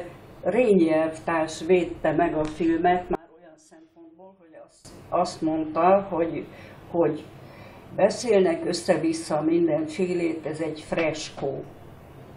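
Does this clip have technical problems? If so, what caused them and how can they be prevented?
Yes. From 3.15 s to 4.85 s the sound drops by about 26 dB and turns faint. The likely cause is one channel inverted: with one stereo side in reversed polarity, everything common to both channels cancels in a mono sum, leaving only their small differences. Prevention: check polarity on every cable, insert and plugin in the stereo path, and monitor a mono fold-down while recording.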